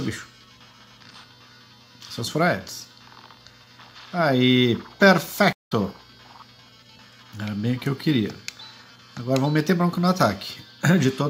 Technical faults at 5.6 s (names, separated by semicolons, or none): stream reconnect